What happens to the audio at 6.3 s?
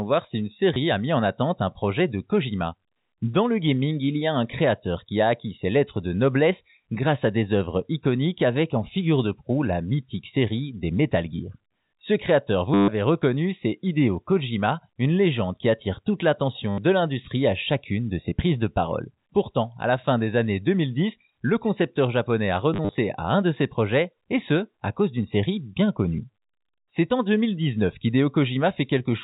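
Nothing goes wrong at 6.3 s: the speech there carries on intact, with only the steady telephone-band sound of G.711 coding, capped just under 4 kHz.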